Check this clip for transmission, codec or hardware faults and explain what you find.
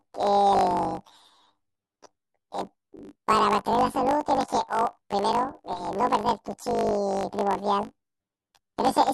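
One fault runs through the whole speech clip.

Throughout, planar audio is read as interleaved: 20 ms blocks storing all left samples, then all right, are read as alternating pairs. Each block replays twice at double speed, an octave up, but the blocks are so short this comes across as a robotic 50 Hz buzz rather than a clear octave shift.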